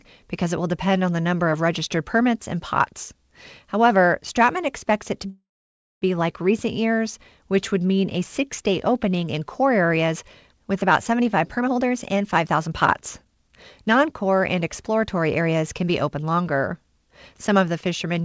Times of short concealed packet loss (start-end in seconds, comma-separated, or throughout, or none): none